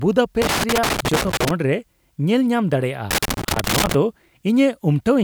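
From 0.42 to 1.51 s, and again from 3.11 to 3.94 s, the speech picks up loose connector crackle. A worn or dirty contact is making and breaking as it shifts, so the signal gets chopped into an irregular, scratchy burst of crackle.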